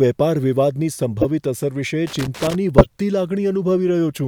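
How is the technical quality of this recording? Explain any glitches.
The recording has three audible glitches from two kinds of fault.

Corrupt frame decoded, at 1.21 to 1.26 s and 2.78 to 2.86 s. Damaged compressed frames were played anyway, putting misplaced energy into short bursts peaking around -5 and 0 dBFS.

Loose connector crackle, from 2.07 to 2.55 s. A poor contact repeatedly broke the signal, producing irregular scratchy crackle.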